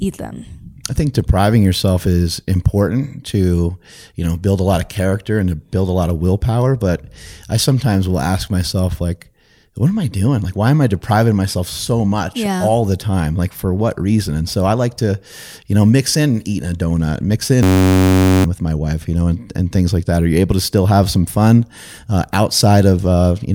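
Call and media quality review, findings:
System hang loop, 17.63–18.44 s, after "eating a donut mix", before "with my wife you". Driver/system froze; audio hardware replayed one 10.67 ms block, fitting a 512-sample buffer, 76 times: steady 93.8 Hz buzz, most of a second lost. Spectrogram: harmonic comb at 93.8 Hz spacing. Waveform: identical repeating cycles.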